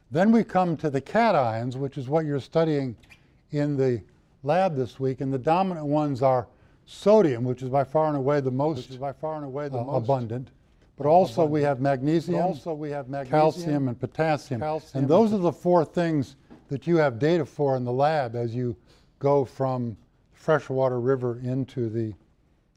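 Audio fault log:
8.77 to 15.37 s, doubled audio track: A second copy of the sound runs about one and a half seconds behind, about 10 dB quieter. It is full-band and dry, with no decay. It starts and stops abruptly, likely from a slower second capture path.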